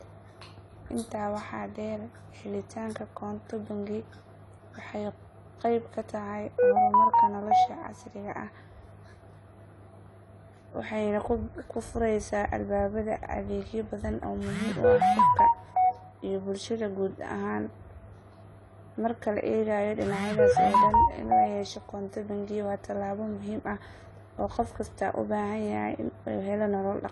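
Speech with AAC compression artefacts throughout, likely from a low-bitrate AAC-LC encode around 32 kbps: dull, warbly, fizzy sibilants, and a spectrogram shows a hard ceiling near 11.5 kHz.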